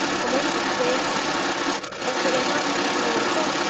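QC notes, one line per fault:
Throughout: other side's voice leaking through, a second voice about 5 dB above the main speech, not a delayed copy of it, likely the far-end loudspeaker left by echo cancellation.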